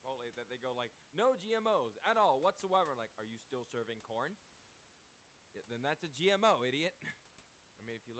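Nothing here goes wrong at any point in the speech: the call path just does its usual job, with the top end rolling off around 8 kHz as you'd expect from an Opus call at a modest bitrate, and the room's background noise sits well down at about 27 dB below the talking.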